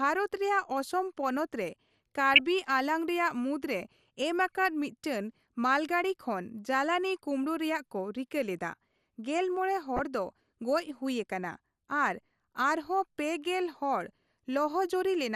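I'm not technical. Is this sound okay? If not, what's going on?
No. Throughout, the speech sounds dull and plainly gurgly, likely from MP2 compression, which drops the upper frequencies and roughens what remains, so the sound stays muffled the whole time. Separately, DAB burbling appears as brief blips of noise at 2.33 to 2.40 s and 9.96 to 10.05 s. These are short reception-error bursts, unlike the constant compression dullness.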